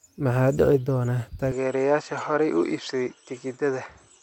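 At 1.52 s the speech abruptly loses its top end and stays that way until the clip ends, sounding duller and more boxed-in with no gap and no jump in loudness. The likely cause is an input switched to a poorer device, a narrower-band microphone or headset path that passes nothing above 8 kHz. On a spectrogram the energy above 8 kHz stops dead at 1.52 s, leaving a flat ceiling. The waveform shows no dropout or level step. A new, very faint noise floor, about 55 dB down, sits beneath the speech.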